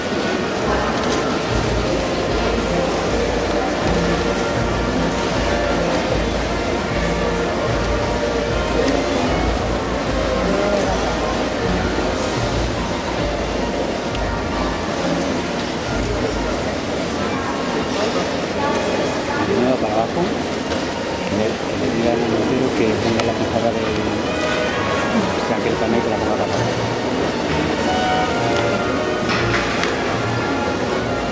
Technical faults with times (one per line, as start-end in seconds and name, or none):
none